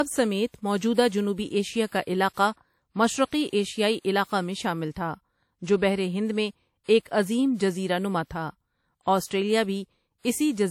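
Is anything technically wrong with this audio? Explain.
Yes. Throughout, this speech is low-bitrate audio saved at a high bitrate. Nothing sounds above 19.2 kHz. The grainy, smeared detail likely comes from an earlier low-bitrate encode, which re-encoding as MP3 cannot restore.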